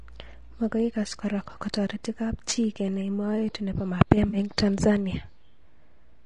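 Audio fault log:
throughout: low-delay AAC compression. The speech is rough and grainy for the whole clip, with noise filling the gaps between harmonics and a thin, synthetic-sounding top band. This is likely AAC-ELD at a low rate, around 32 kbps. Its short frames blur pitch structure, and the damage is steady rather than patchy.
4.27–4.37 s: AAC frame loss with concealment. A brief smeared, noisy patch appears where roughly 60 ms of coded audio went missing, which fits about three lost frames. The decoder filled the gap by reusing and scrambling the last good spectrum. Unlike a plain dropout, there is no silent hole, only a local blur that differs from the constant coding grain.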